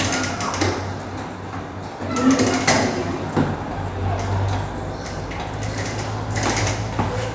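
No technical faults can be heard anywhere in this recording of sounds.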